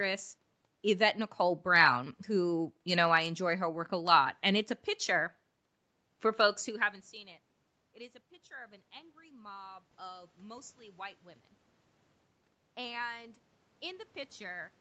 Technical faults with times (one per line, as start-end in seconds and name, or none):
7.80-11.27 automatic gain rising
12.59-14.70 automatic gain rising